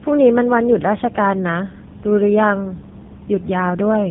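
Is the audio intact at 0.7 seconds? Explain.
No. At 0.7 seconds, as throughout the clip, the speech suffers from tandem speech coding. It sounds like it passed through two low-rate speech codecs in a row, most likely a GSM full-rate leg and then AMR-NB. The second coder re-encodes the first one's flawed output, so the errors stack. The speech sounds rough, muffled and warbly. On a spectrogram, nothing appears above 3.7 kHz, and the harmonics look smeared and blotchy.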